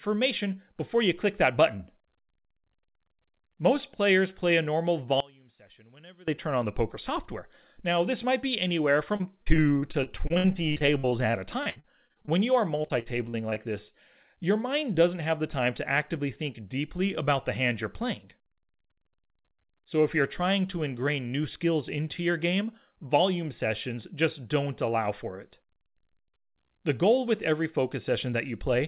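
From 5.20 to 6.28 s the speech suddenly drops by about 23 dB and turns faint, with the centred body of the voice nearly gone. This points to one channel inverted: one side of the stereo pair has likely had its polarity flipped, so when the two sides are summed to mono the shared, centred sound cancels and only the small difference between them survives.

At 9.16 s the speech turns choppy, with pieces missing, and this lasts until 12.32 s. A second, shorter burst follows from 12.82 to 13.96 s. This is repeated packet loss (robotic sound). Audio kept arriving late or not at all. Each hole, the longest about 60 ms, was patched by stretching the previous fragment, and the next hole came before the speech could recover. About a fifth of the first stretch and about a sixth of the second is filled-in sound rather than real speech. Throughout, nothing is heard above 4 kHz, which fits G.711 telephone-band coding on the call path.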